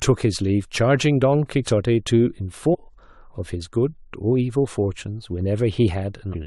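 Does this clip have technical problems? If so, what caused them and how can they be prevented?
Yes. There are two short glitches from damaged data in a compressed stream, one from 2.73 to 2.75 s and a quicker one at 6.33 s. Each is a brief disruption. Some of the compressed bytes there were wrong, so the decoder couldn't read those frames, lost sync and had to hunt for the next valid frame header. To prevent it, check file integrity after transfer and carry the stream over a reliable, checksummed transport.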